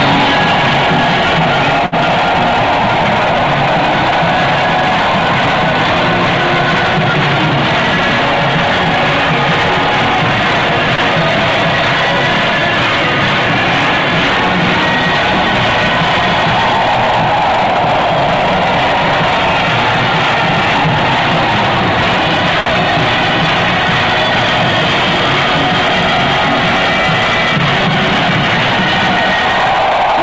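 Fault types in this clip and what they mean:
Short stall from a late packet: A packet arrived late, so the receiver held the last sound until it came, with nothing lost. Here held sounds last about 61 ms at 1.86 s, 28 ms at 10.95 s and 57 ms at 22.6 s, each with a slight buzz or dip.
Jitter buffer speed-up: Too much audio had built up in the buffer, so the receiver trimmed small pitch-period pieces repeatedly. From 16.95 s to 18.37 s the sound runs about 3 percent fast at unchanged pitch. Roughly 50 ms is removed.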